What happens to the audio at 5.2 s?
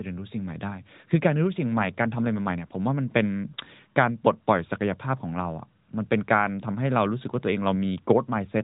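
Nothing goes wrong at 5.2 s: the speech carries straight through that moment with no fault, still sounding like a narrowband mobile call.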